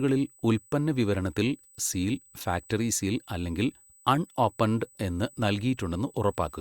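From start to finish the speech carries USB whine, a thin steady tone fixed at 8 kHz and sitting roughly 30 dB below the voice. The pitch points to USB microframe timing: the bus pulls current in bursts every 125 microseconds, and that ripple reaches the audio path through shared power or ground. Because 8 kHz is high and constant, it reads as a faint electrical whistle laid over the speech.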